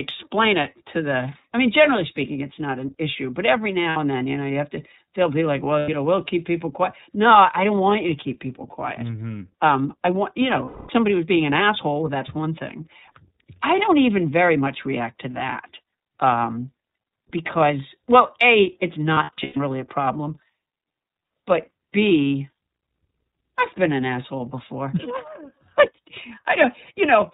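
Throughout, the speech carries iLBC codec damage: band-limited below 4 kHz, plainly rough and synthetic, which fits 30 ms frames at about 13.3 kbps. Lost iLBC frames at 3.89 s (60 ms), 5.79 s (90 ms), 10.65–10.9 s (240 ms) and 19.14–19.57 s (scattered, longest run around 100 ms) are concealed by a repeated pitch cycle, heard as held buzzy vowels, with the voice returning almost at once.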